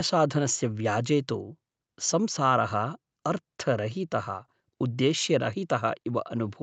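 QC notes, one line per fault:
No faults to note.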